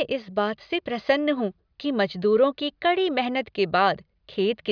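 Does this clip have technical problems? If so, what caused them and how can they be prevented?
No, no technical faults here.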